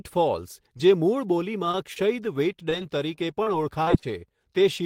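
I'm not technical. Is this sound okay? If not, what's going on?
No. Short concealed packet loss shows up at 0.77, 1.71, 1.93 and 2.70 seconds. Each time, about 20 milliseconds of the call arrived too late, so the receiver guessed by stretching the preceding speech sound, leaving a tiny smear or wobble.

Repeated packet loss (robotic sound) follows from 3.16 to 4.04 seconds. Several holes, the longest about 44 milliseconds, hit in quick succession. Each is patched the same way, so the speech turns choppy, with small pieces missing.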